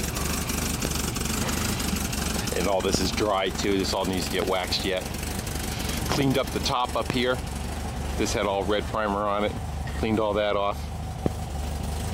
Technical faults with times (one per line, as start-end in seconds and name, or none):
0.85-0.87 loud pop
2.95-2.97 loud pop
4.42-4.44 loud pop
6.12-6.23 loud pop
7.10-7.12 loud pop
11.26-11.28 loud pop